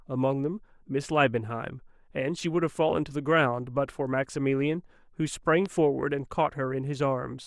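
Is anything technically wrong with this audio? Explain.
Yes. At 5.66 to 5.68 s a single loud pop cracks a few decibels above the speech. It is likely a voltage pulse from a plug, switch or static entering the signal path.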